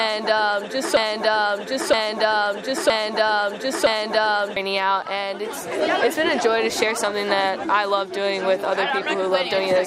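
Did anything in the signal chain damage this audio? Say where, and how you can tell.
Yes. From 0.97 s to 4.57 s, a 0.97 s fragment repeats exactly four times back to back: a broken-record loop. The playback buffer or stream likely stalled and kept resending its last held fragment, so the audio due then is gone.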